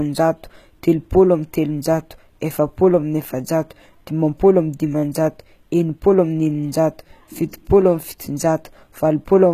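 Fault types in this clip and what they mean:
HE-AAC compression, throughout: plainly audible rebuilt treble, copied upward from lower bands with mismatched harmonics, nothing above 14.9 kHz; likely a low-bitrate HE-AAC encode.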